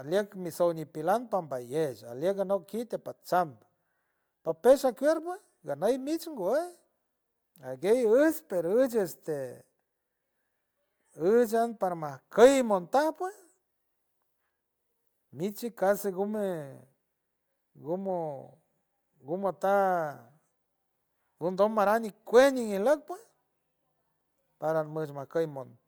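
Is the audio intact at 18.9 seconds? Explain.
Yes, the audio is intact at 18.9 seconds, with no fault audible at that moment.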